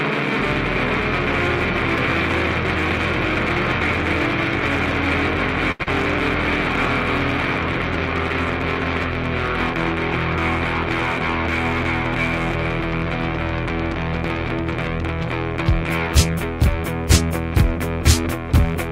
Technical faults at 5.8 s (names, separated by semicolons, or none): short stall from a late packet; short concealed packet loss